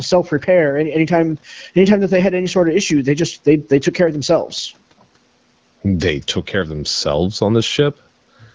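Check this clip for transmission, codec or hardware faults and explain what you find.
No faults found: the speech carries the expected signature of call microphone processing, with no content above 8 kHz, and of the AMR wideband (HD Voice) codec at 12.65 kbit/s, whose light coding is normal for that rate.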